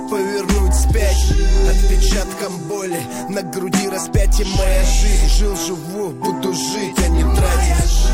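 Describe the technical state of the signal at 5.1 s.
At 5.1 s the signal is intact, with no dropout, distortion or other fault audible at that moment.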